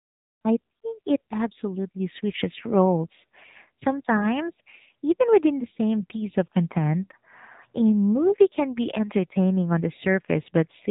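Throughout the speech, an AMR narrowband mobile codec passes nothing above about 3.8 kHz and rebuilds the voice from a pulse-driven vocal-tract model. The plainly buzzy, synthetic edge fits a low rate near 7.4 kbps, setting it apart from a simple low-pass filter.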